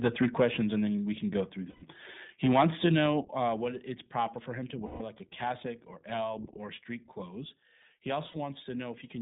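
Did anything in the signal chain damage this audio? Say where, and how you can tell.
Yes. The whole clip passed through the iLBC codec at the codec stage. The spectrogram shows energy only between about 150 Hz and 3.7 kHz, nothing above. The speech has a plainly audible rough, synthetic texture, which fits iLBC's 15.2 kbps mode with 20 ms frames.

From 0.04 to 0.44 s there is microphone overload, likely at the analogue input or converter. Peaks run about 5 dB past full scale, so the waveform shows flat-topped tops on a few percent of samples and the loudest syllables sound harshly crackly.

The microphone volume stepped down twice, likely through the call software's automatic gain control. At 0.42 s, just before "and then we can", the level drops by about 3 dB. At 3.21 s, before "uh what it's", it drops by about 7 dB. The waveform envelope shows both as abrupt steps.

Lost iLBC frames, a network loss that the decoder concealed, occur at three points. 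The first is 1.70 to 1.84 s (120 ms), just after "we can go through". The others are 4.86 to 5.02 s (140 ms) and 8.28 to 8.37 s (60 ms). Each gap sounds like a held, buzzy vowel, with repeated pitch harmonics on the spectrogram. The spans fit six, seven and three 20 ms frames, and the sound recovers immediately afterwards.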